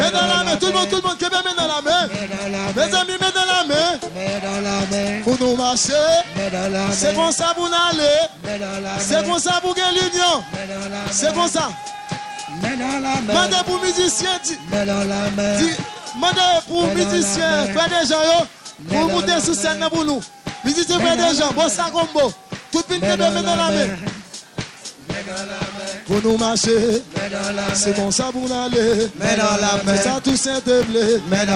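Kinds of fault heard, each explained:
Filter restarted on every block: The filter's memory is cleared at each block boundary, so every block starts from silence with a small transient. This yields a steady buzz near 46.9 Hz that tracks the signal level, which fits a 1024-sample block.
GSM phone buzz: Radio bursts from a nearby 2G phone are rectified in the audio circuitry. From 13.40 to 14.38 s a hard, raspy, harmonic-rich buzz at 217 Hz sits about 16 dB below the signal, nearly steady as during a call.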